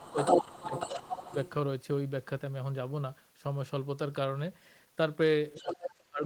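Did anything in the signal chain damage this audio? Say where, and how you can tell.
Yes, and it's in the call processing, almost certainly the echo canceller. The talker gets speech suppressed in double talk in three places: right at the start to 0.17 s, dipping about 20 dB; from 0.38 to 1.33 s, pulling down roughly 15 dB over most of that stretch; and from 5.58 to 6.24 s, where it dives about 30 dB. The second and third dips line up with a second voice, so the canceller likely couldn't tell the two apart and ducked everything.

That second voice is the other side's voice leaking through. From 0.17 to 1.5 s it sits at roughly the same level as the talker. It comes back from 5.56 to 5.94 s, about 10 dB down. It's far-end audio from the loudspeaker reaching the mic, likely residual echo the canceller failed to subtract, so it lands in the send path alongside the talker.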